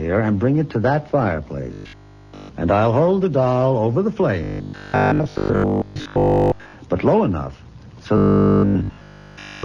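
From 1.73 to 2.57 s, 4.44 to 6.76 s and 8.17 to 9.63 s the sound goes rigid and metallic, with a 50 Hz buzz. That's robotic sound from repeated short buffers, likely a 20 ms chunk replayed while most of the real audio is skipped, and all of it in the last stretch.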